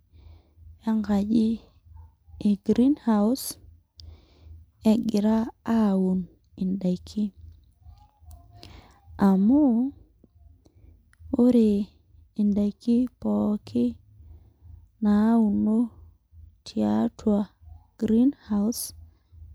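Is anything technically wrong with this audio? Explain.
No, nothing technically wrong turns up anywhere in this speech recording.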